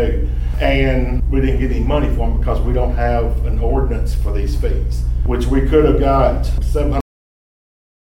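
At about 7.01 s the sound just stops dead, mid-event, with a cut-off end. The final stretch of audio was never written out or played, so instead of decaying naturally it drops straight to digital silence and stays there for the last second.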